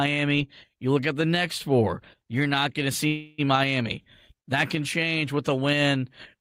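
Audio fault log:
3.07–3.40 s, call audio freeze. Right after "you're not going to", the speech halts and its last sound is stretched into a fading buzz for 309 ms. Then it resumes exactly where it stopped, with nothing lost. Delayed packets likely emptied the jitter buffer.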